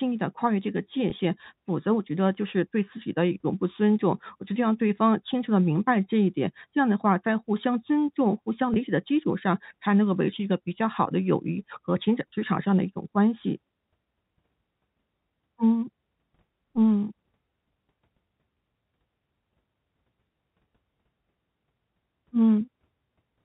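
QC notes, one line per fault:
1.10 s and 8.74 s, packet loss with pitch repetition: each 20 ms gap, consistent with one lost packet, is filled by repeating the last pitch period, which briefly holds the telephone-band speech as a short buzzy note.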